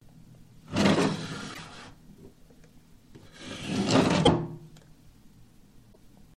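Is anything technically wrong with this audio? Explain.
Yes. At 1.53–1.58 s, 4.25–4.28 s and 5.92 s the audio jumps ahead with a brief glitch, likely a broken MP3 bit reservoir: after frames go missing, the next frame reaches back for borrowed data and decodes bytes from the wrong frame. Unlike a simple dropout, the sound skips forward rather than pausing and resuming, and the MP3 frames here are roughly 26 ms long.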